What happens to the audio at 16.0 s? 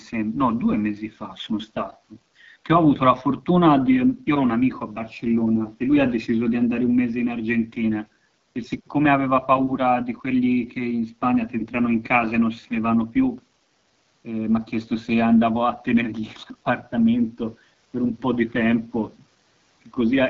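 At 16.0 s the speech sounds rough and raspy, as it does through the whole clip. This is the AMR wideband (HD Voice) codec at a low rate, likely its 8.85 kbit/s mode, too coarse for its pulse-driven vocal tract model.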